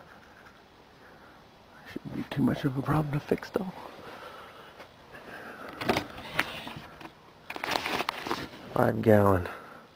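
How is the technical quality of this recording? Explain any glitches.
The recording has one call bitrate drop, from 0.92 to 5.19 s. The encoder got far fewer bits, which fits a fall from 64 to 24 kbps. The sound turns coarse and muffled for about 3.2 s before clearing.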